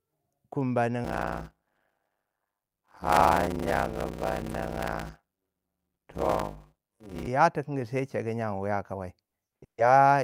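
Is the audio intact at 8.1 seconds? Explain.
Yes, the speech at 8.1 seconds plays through intact, with no dropout, click, distortion or other fault at that moment.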